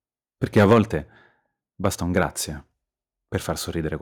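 From 0.57 to 0.78 s the speech crackles harshly, most likely from microphone overload: input gain pushed peaks about 4 dB past the converter's ceiling, so several percent of samples are flattened. The waveform shows squared-off tops, and the spectrogram shows broadband smearing above each peak. At 0.73 s the voice and background drop together by about 3 dB in one step, likely the call software stepping the microphone volume down after clipping. The waveform envelope shrinks abruptly there. After "basta un", from 2.17 to 2.23 s, a milder overload briefly roughens the sound. Peaks run about 1 dB over, likely from input gain that is still slightly high, and just under one percent of samples have flat tops.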